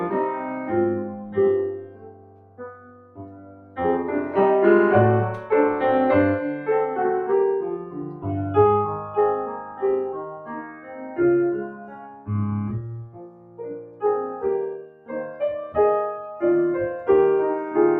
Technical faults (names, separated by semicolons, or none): noise suppressor applied to music or sounds; sound cut by the noise suppressor